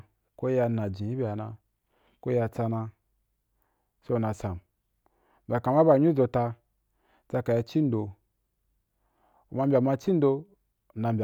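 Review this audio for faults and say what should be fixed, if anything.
No faults can be heard anywhere in the speech. Nothing needs to be fixed.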